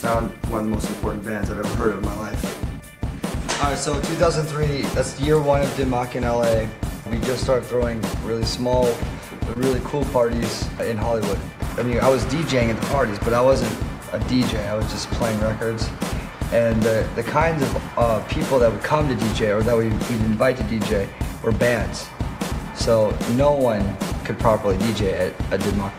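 Short concealed packet loss occurs from 9.53 to 9.57 s. About 20 ms of audio failed to reach the decoder in time, and the receiver filled the gap by extending the preceding sound for roughly 19 ms: a continuation of its pitch where the signal was tonal, shaped noise where it was not. It then crossfaded back into the real stream. The result is a brief smeared or wobbly patch, lasting only a few hundredths of a second.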